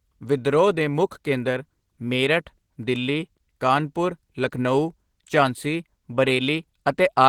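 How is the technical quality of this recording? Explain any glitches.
The recording is clearly degraded by lossy compression from start to finish. Opus voice compression runs throughout the speech, with a hybrid SILK-plus-CELT sound that fits a bitrate of about 16 kbps. Starved of bits, the excitation is coded coarsely, leaving plainly audible hoarse, grainy and slightly robotic voicing, while the upper band above 8 kHz stays present but thinly reproduced.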